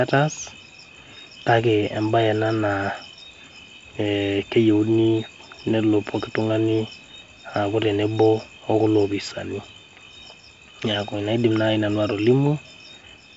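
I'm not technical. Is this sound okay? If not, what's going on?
Yes, this sound is okay: nothing is going wrong in it.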